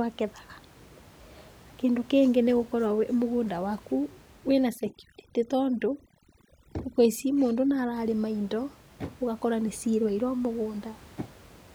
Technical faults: overdone noise removal

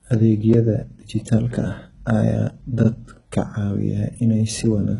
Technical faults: HE-AAC compression

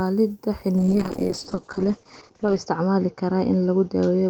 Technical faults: call bitrate drop

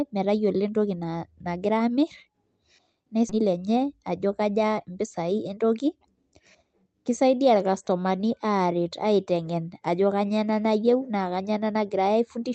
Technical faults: skip ahead; jitter buffer speed-up

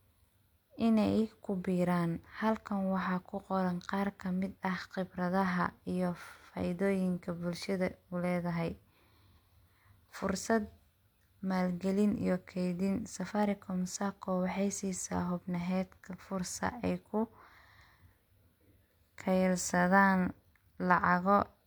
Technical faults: none

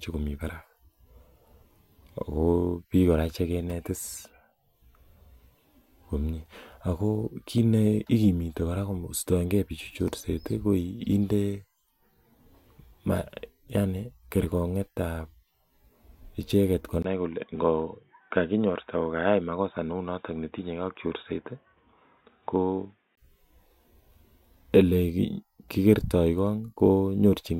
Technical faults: input switched to a poorer device

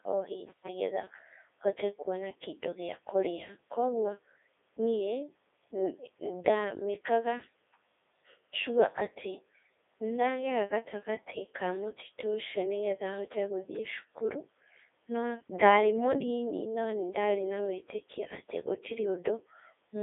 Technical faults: Codec 2 vocoder

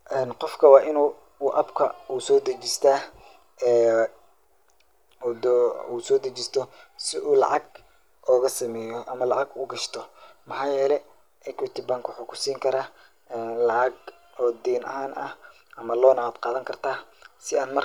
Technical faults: none

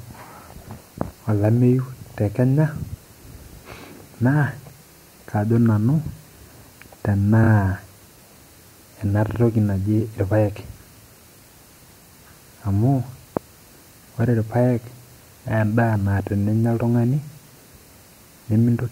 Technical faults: repeated frames

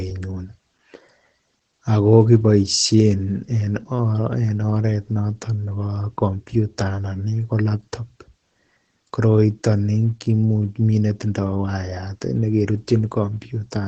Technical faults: Opus voice compression

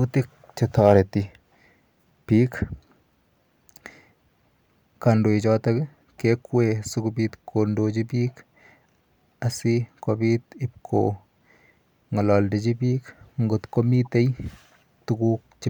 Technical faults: hard clipping; corrupt frame decoded

